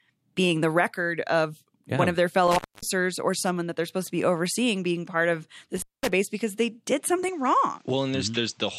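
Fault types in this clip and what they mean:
Intermittent contact, 2.48 to 2.83 s and 5.76 to 6.09 s: the speech drops out twice, right after "yeah one of their" and again after "overseeing being part of", for roughly 0.25 s and 0.21 s. A loose cable or plug momentarily breaking the signal path explains the sudden gap with a crackle at each edge and only faint hiss left while the line is open, before the sound snaps back at "or someone that they're" and "because they did".
Input switched to a poorer device, 7.29 s to the end: right after "because they did" the speech turns duller, with nothing above 8.2 kHz and a new background noise floor sitting well under the speech, around 35 dB down. There is no silence at the changeover and the level stays about the same. The sudden narrowing of the band and change of noise character likely come from the recording input jumping to a lesser microphone or headset path.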